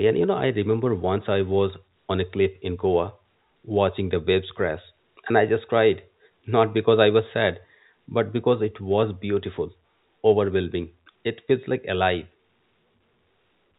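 Nothing stood out on listening to this speech, which comes through a G.711 A-law call path at 64 kbps with nothing above 4 kHz.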